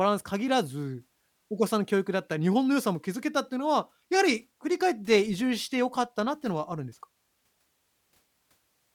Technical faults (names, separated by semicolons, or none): none